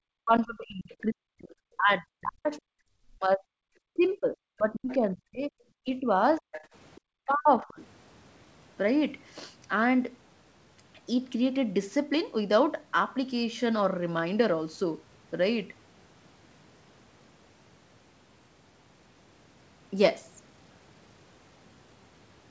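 Speech carried over a call path whose bandwidth stops at 8 kHz, consistent with G.722 at 64 kbps. The echo canceller was likely confused by both sides talking at once, so it suppressed the talker's own voice in double talk. The speech sinks by up to around 40 dB from 0.19 to 3.58 s, by around 35 dB in patches from 3.94 to 6.45 s, and by around 30 dB from 7.26 to 7.79 s. Residual echo, likely from incomplete cancellation, lets the other side's voice leak through: a brief scrap at 4.9 s roughly 25 dB below the speech, then a longer stretch from 6.39 to 7.01 s only about 15 dB down.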